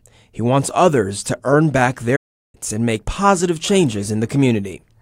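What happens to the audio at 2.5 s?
At 2.5 s the audio is inside a playback stall that runs from 2.16 to 2.55 s. The sound halts mid-flow and the output sits silent for about 376 ms before sound returns. The likely cause is the player running short of data, or its playback thread being blocked, so nothing reached the output until it recovered. Unlike a brief dropout or a lost packet, which leave a gap of a few milliseconds, this silence lasts long enough to hear plainly as a pause.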